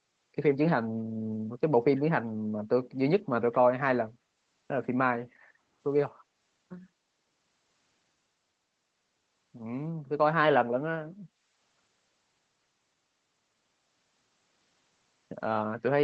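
At 1.97–2.01 s and again at 3.52–3.56 s, a faint, brief scrap of the speech returns about 215 ms after the original, far below the main level. This is likely an echo leak: a loudspeaker's output reached the far microphone and slipped past its echo canceller.

From 5.32 to 5.62 s, the room background sinks by about 9 dB for roughly a third of a second, then recovers. This is background gated by the echo canceller, which pulled the microphone down while it judged the loudspeaker active.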